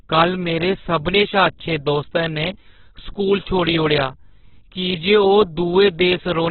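Throughout the speech, everything above about 4.4 kHz is missing, and what remains sounds rough and grainy rather than swirling or watery. That texture sets it apart from MP3 damage: the bands keep their energy but are filled with noise or borrowed content instead of being left as holes. The heavy loss and narrow bandwidth point to a very low bitrate, around 8 kbps, so the likely cause is Opus compression in its music mode.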